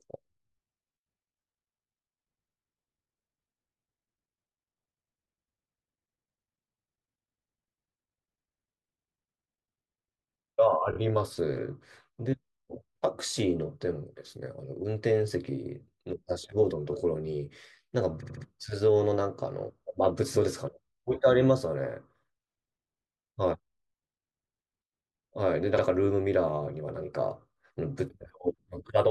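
Speech with repeated frames. At 10.91–10.96 s, a 24 ms block plays twice more. At 18.21–18.42 s, a 72 ms block plays three more times. At 25.77–25.81 s, a 48 ms block repeats once. Each is heard as a stutter. Compressed frames were duplicated, so the decoder replays them and the audio lengthens.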